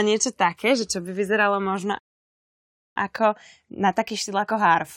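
At 1.99 s, right after "čo by vyzeralo možno", the speech drops into silence until 2.96 s, then picks up exactly where it left off. That's a rebuffering stall: the player ran dry of downloaded audio and waited, adding about 0.97 s without losing anything.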